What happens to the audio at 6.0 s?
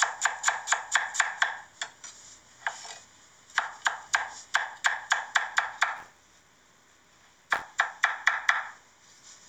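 Buffer tearing runs from 5.96 to 7.62 s. Writer and reader cross every period, splicing in a small slice of audio about 20 ms stale. That makes an 86.1 Hz robotic buzz, which fits a 512-sample buffer. On the waveform there are regular hard jumps; the spectrogram shows evenly spaced vertical striations.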